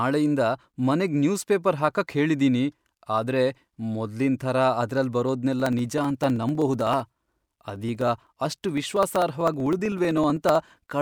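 From 5.6 to 10.94 s, periodic USB or driver dropouts occur. A stalled driver skips about half a millisecond every 63.5 ms. This is heard as regular ticking.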